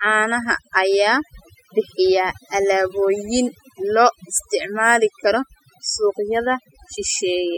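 Overdone noise removal runs through the whole speech recording, from the first moment to the last. A noise reduction stage set far too aggressively has pulled individual frequency bands down, or out entirely, wherever their level sat close to what it judged to be noise, taking the softer parts of the voice along with the noise. The result is a background of near silence dotted with twinkling specks.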